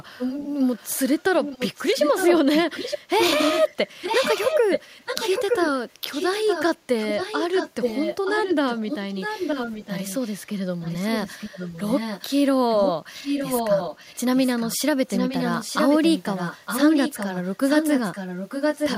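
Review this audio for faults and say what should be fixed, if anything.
Echo leak runs through the speech at 0.18–5.68 s, 6.09–6.64 s, 6.99–10.38 s, 10.81–12.27 s and 12.71–18.98 s. A copy trails the speech by 914 ms, roughly 5 to 10 dB quieter. A loudspeaker on the far end likely fed its microphone, and its echo canceller let the sound through. To prevent it, the far end should use a headset or retune its echo cancellation.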